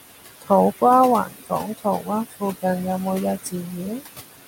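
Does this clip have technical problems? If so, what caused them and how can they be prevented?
Yes. Noise suppressor artifacts run through the whole clip. The room noise sits about 13 dB below the speech. The suppressor lowers it by about 16 dB, band by band and frame by frame. So the background sinks in the pauses and comes back up under the speech. To prevent this, cut the noise at its source or use a gentler suppression setting.

Speech cut by the noise suppressor appears from 1.26 to 1.52 s and from 1.78 to 2.09 s. In each stretch, about a tenth of a second of sound drops by up to about 13 dB. The suppressor took these quiet speech parts for noise and turned them down. They sound swallowed and faint. To prevent this, lower the suppression strength or move the microphone closer so the speech stands further above the noise.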